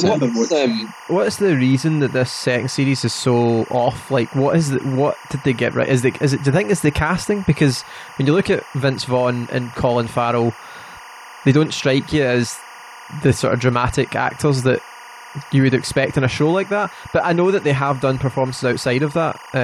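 Speech, with timecode bleed running under it from start to finish. A steady chirping warble, flipping between tones around 1 and 2 kHz and sitting roughly 20 dB below the voice, fits 24 frames-per-second linear timecode leaking in from an adjacent track or cable.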